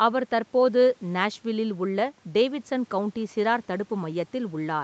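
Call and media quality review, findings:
Nothing to flag here: the speech comes through the call's microphone processing and Opus call path as you'd expect, with nothing above about 8 kHz, which fits a wideband call setup.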